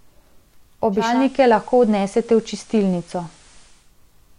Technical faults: digital radio blending to analogue

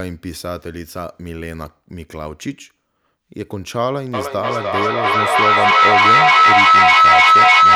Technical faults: feedback howl

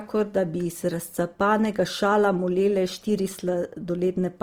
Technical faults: Opus compression

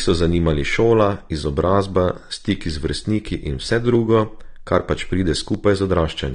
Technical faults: AAC compression; clock drift buffer slips

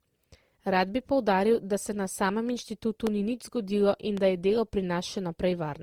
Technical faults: generation loss; loud pop

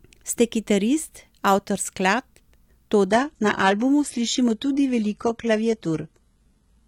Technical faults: adaptive stream at a lower bitrate

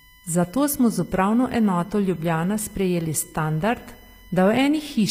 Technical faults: USB whine; HE-AAC compression

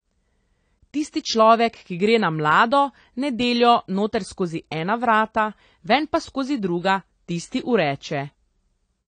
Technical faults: AAC compression

